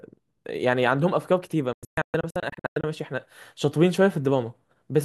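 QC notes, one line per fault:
1.73–2.84 s, digital broadcast dropout: the speech cuts out in a cluster of short holes, totalling about 648 ms over roughly 1.1 s, the longest 120 ms. The receiver muted corrupted frames, likely of about 24 ms each, with near-instant 3 ms fades, so that material is simply gone.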